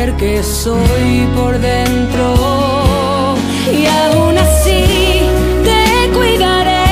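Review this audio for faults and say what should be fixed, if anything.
No faults are audible; nothing needs fixing.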